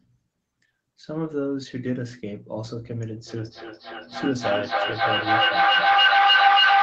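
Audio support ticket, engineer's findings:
Feedback echo between two devices from 3.26 s to the end. The sound returns about every 300 ms, thinner and ringing. It builds to about 10 dB above the talker instead of decaying. A second device plays this microphone's own signal back into it, which the local canceller cannot remove.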